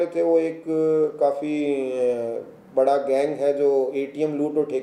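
No technical faults can be heard in this audio.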